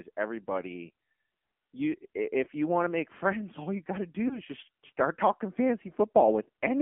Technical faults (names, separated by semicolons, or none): AMR narrowband mobile codec; lost AMR speech frames